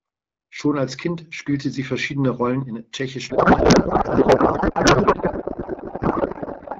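From 3.29 s to the end, a codec payload misread takes over: octet-aligned AMR frames are being parsed as bandwidth-efficient, so the fields land in the wrong places. The HD Voice speech turns into garbled, warbling noise that barely tracks it.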